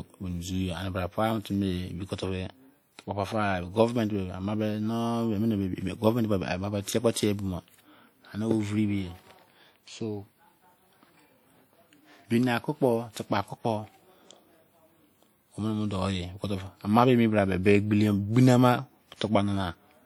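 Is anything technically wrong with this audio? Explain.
Yes, there are two problems. Throughout the speech there's plainly audible codec damage, a ringing, washy quality with hiss that swells and fades along with the signal. That's likely WMA compression, and the level of damage fits a low bitrate around 48 kbps, where long transform blocks smear the noise.

Around 7.13 to 7.17 s there's pre-echo: a burst of hiss lasting about 32 ms arrives just ahead of a sharp attack. The codec spread noise meant for the loud onset across its whole block, so the attack sounds smeared.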